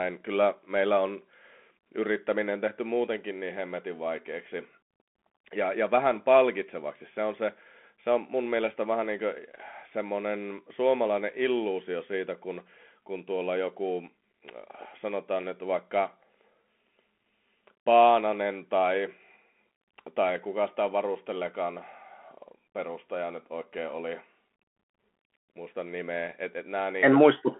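Throughout, the speech sounds thin and boxed-in, cut off above 3.8 kHz, with scratchy s sounds, grit on loud bright passages and a granular hiss beneath. That is the Bluetooth CVSD headset codec: a one-bit up-or-down coder, fitting 64 kbps, whose adapting step lags fast high-frequency swings.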